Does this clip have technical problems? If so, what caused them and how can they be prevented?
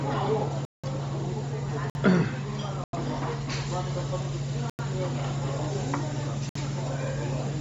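Yes. Throughout, nothing is left above 7.8 kHz and the top carries a grainy, breathy noise fill rather than a clean low-pass roll-off. This is likely Bluetooth LC3 compression at a low bitrate. Sending the sound at a higher LC3 bitrate, or over a wired path, prevents it.

There are five blocks of digital silence at 0.65–0.84 s, 1.90–1.95 s, 2.84–2.93 s, 4.70–4.79 s and 6.49–6.55 s. Each has abrupt edges, unlike a faded dropout. The 186 ms and 93 ms holes fit 8192- and 4096-sample output buffers that were not filled in time. Larger buffers or lighter real-time processing prevent them.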